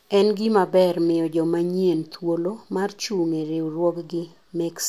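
No technical faults are audible.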